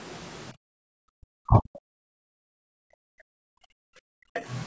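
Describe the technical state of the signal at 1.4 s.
At 1.4 s the speech is sharply pulled down, sinking by about 40 dB at its deepest across the span from 1.07 to 1.79 s. This is speech suppressed in double talk, and the likely cause is that both ends were talking at once: the echo canceller could not tell this talker apart from its own loudspeaker echo, so it attenuated both for roughly 0.7 s.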